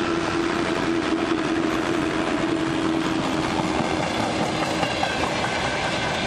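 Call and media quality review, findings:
Overlap-add ripple, 0.00 to 4.04 s. Symptom: metallic buzz with extra tones around each note, level swinging by about 6 dB. Probable component: frame-based processing stage at resynthesis. Mechanism: windowed frames recombined with an overlap whose summed windows don't hold constant gain, so level dips and peaks once per frame, at around 100 Hz. Ripple stops after 4.04 s.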